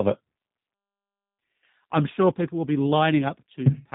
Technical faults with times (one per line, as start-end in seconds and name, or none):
0.00-3.95 G.729 codec